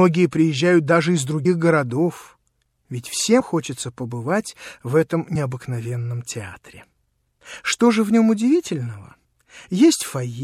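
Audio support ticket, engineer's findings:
Audio missing between chunks. Abrupt skips at 1.45 s and 5.35 s. Around 50 ms of audio gone at each, with both sides butted together and no silence in the gap. Likely cause: capture or processing stage losing a slice while closing one buffer and opening the next, which fits a 2-second chunk size. Check chunk handover in the recorder pipeline. Confirm whether the missing slice is dropped before or after the write.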